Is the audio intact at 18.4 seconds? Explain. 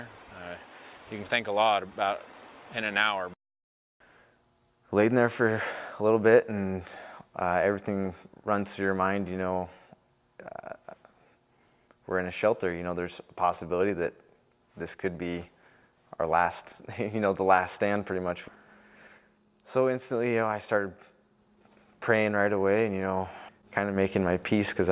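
Yes, the audio is intact at 18.4 seconds, with no dropout, click, glitch or other fault to be heard at that point.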